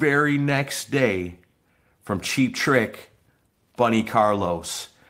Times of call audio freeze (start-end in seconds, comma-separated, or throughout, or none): none